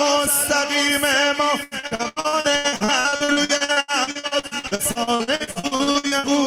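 From about 1.63 s to 6.26 s the audio breaks into repeated packet loss, the robotic sound you get when dozens of short dropouts, none longer than 80 ms, keep getting patched by stretching the last bit of sound. Roughly 43% of that stretch is filler, so it's choppy with pieces missing.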